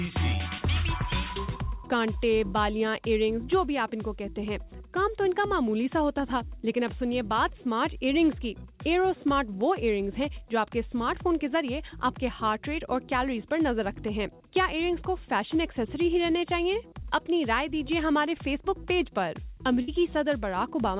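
At 19.82 s, near the end, a burst of packet loss cuts in for about 76 ms. The receiver stretches the last sound for 56 ms, fading it into a held buzz or hiss. Audio resumes with roughly 60 ms skipped. The narrowband call path, with nothing above 4 kHz, fits a G.711 mu-law codec at 64 kbps.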